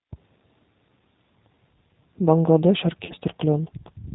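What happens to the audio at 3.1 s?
VoIP packet loss concealed by the speech codec, from 3.05 to 3.13 s. About 40 ms of audio went missing, which fits two lost packets, and the decoder filled the gap by repeating its last pitch and filter settings with falling gain. The result is a brief smeared stretch, a buzzy tone or coloured noise, that fades and stays weak for a moment after audio resumes.

This happens within G.729 codec coding at 8 kbit/s. The speech is rebuilt from a vocal tract model and sparse pulses, with nothing above 4 kHz, so it sounds plainly rough and synthetic.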